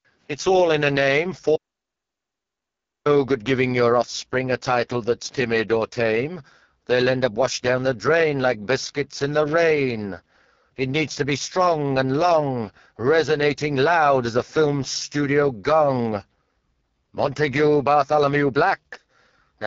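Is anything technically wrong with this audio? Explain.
Yes. The speech shows three faults.

Throughout, the AMR wideband (HD Voice) codec leaves the speech rough and raspy, which fits its lowest 6.6 kbit/s mode. Nothing sits above 6.9 kHz.

From 1.56 to 3.05 s, an audio dropout to silence removes about 1.5 s. There is no room tone. The input was likely lost briefly.

From 5.29 to 5.48 s, loose connector crackle breaks in. A faulty contact chopping the signal gives an irregular burst of scratchy crackle.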